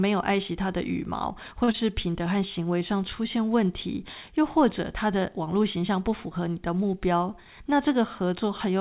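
A short stall from a late packet comes at 1.64 to 1.70 s. A packet missed its playout time and the jitter buffer ran dry, so the receiver held the last sound for 37 ms until the packet turned up, then carried on from the same point. Nothing is lost, but the sound hangs slightly too long with a slight buzz or dip, and playback now runs 37 ms later than before.

A short concealed packet loss follows at 1.72 to 1.76 s. About 20 ms of audio never reached the decoder in time. The receiver bridged the gap by extending the preceding sound, following its pitch if it was voiced or as shaped noise if it was not, for 19 ms, then blended back into the real signal. It comes across as a brief smear or wobble right after the stall.

A jitter buffer speed-up runs from 7.38 to 7.76 s. The buffer was holding more audio than its target, so the receiver trimmed out short pitch-period slices again and again, roughly 40 ms in total, to bring the delay down. 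Playback over this stretch runs at 109% speed with the pitch unchanged, so the speech sounds hurried. The narrowband sound throughout, with nothing above 4 kHz, fits a G.711 call codec.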